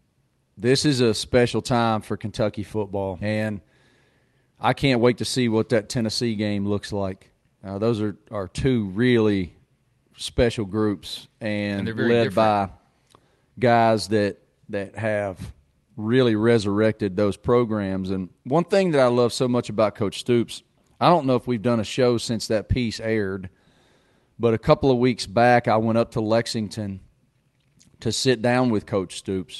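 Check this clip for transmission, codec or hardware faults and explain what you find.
Three transmission faults are audible in this speech clip, all within two seconds of each other, on top of an Opus-style call path whose coding limits the band to about 12 kHz.

Skip ahead, 3.21 to 3.23 s: roughly 0.4 s of audio is dropped with no fill, so playback jumps forward and the two sides join almost directly.

Jitter buffer speed-up, 3.31 to 3.53 s at 113% speed and 4.31 to 5.10 s at 107%, ending just before "to see what that": the receiver trimmed pitch periods to shed excess buffered delay. About 40 ms and 70 ms were removed, respectively. The speech sounds hurried at unchanged pitch.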